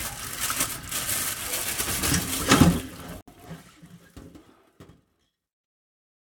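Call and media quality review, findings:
Gap at a join of encoded pieces, 3.21 to 3.28 s: roughly a 67 ms hole in continuous sound, smeared edges, then picks up where it left off. Likely separately encoded segments concatenated untrimmed, with encoder delay and last-frame padding left in.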